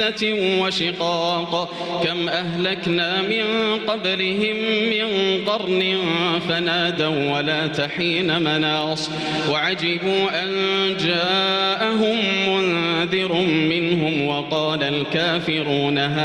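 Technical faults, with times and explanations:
Throughout, gain pumping: the gain swings by roughly 10 dB. Loud and quiet passages sit unnaturally close in level and the whole clip sounds squashed. The likely cause is input gain set far too high, with a fast limiter or compressor pulling it back down on each peak and releasing it in the pauses.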